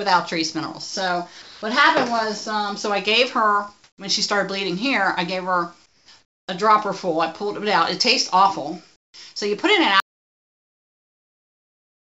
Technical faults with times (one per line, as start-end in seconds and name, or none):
1.42-1.62 sound dropped by the voice detector
3.84-3.98 comfort noise in place of the background
5.86-6.48 comfort noise in place of the background
8.96-9.14 comfort noise in place of the background
10.00-12.18 audio dropout to silence